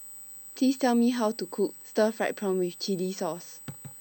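USB whine runs throughout the speech: 125-microsecond bus microframes leak through power or ground as a fixed 8 kHz tone, strongest at 16 kHz, about 20 dB down.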